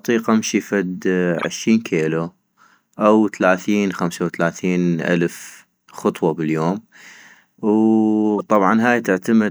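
Speech, with two corrupt frame decoded faults. After "امشي فد", a loud burst runs from 1.39 to 1.45 s, peaking around -5 dBFS. A quieter blip follows at 8.37 to 8.42 s. Each burst suggests a few damaged codec frames decoded anyway, spraying energy into the wrong frequencies.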